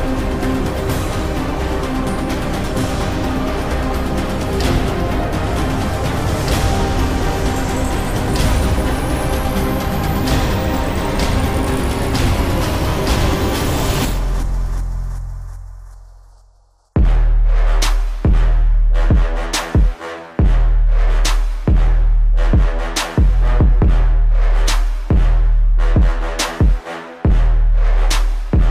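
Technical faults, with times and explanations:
No technical faults detected anywhere in the clip.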